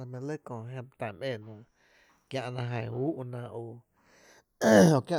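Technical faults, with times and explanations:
Throughout: channels drifting apart. The left and right channels of this speech come from devices running on separate clocks, with a mismatch of roughly 70 ppm, so the inter-channel delay slides steadily, reaching around 0.2 ms by the end. Summed to mono, that changing offset creates comb-filter notches that sweep slowly across the spectrum, heard as a gradual flanging or hollow, phasey colouration that shifts over the course of the clip.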